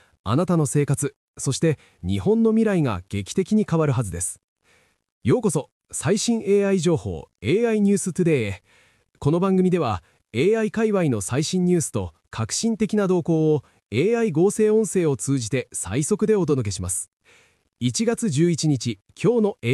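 Nothing in the recording stood out as a technical problem on listening.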